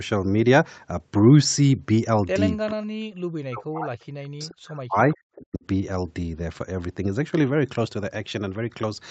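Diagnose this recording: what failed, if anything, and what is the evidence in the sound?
Call processing: the speech plunges by around 40 dB at 2.71–3.95, 4.18–5.16 and 5.36–5.63 s, likely speech suppressed in double talk as the echo canceller ducked everything.

Also call processing: a faint delayed copy, about 30 dB down and 434 ms late, pops up at 5.13–5.17 s, likely an echo leak slipping past the canceller.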